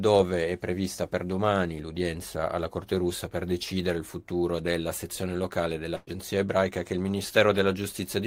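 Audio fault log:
5.95 to 6.10 s, burst of packet loss: right after "futuro della sezione locale", the speech stops advancing and the last sound is stretched out and faded for about 115 ms, a smeared tail rather than silence, because several consecutive packets never arrived in time and the receiver concealed the hole by extending what it already had. When "ebraica che il" arrives, about 120 ms of speech has been skipped, so the words jump forward across the gap.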